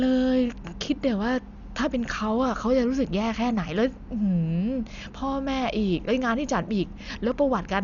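Throughout, the speech is dull and cut off above 7 kHz, with rough, fluttering noise around tones rather than MP3-style warbling, likely from heavy Dolby Digital compression at a low bitrate near 48 kbps.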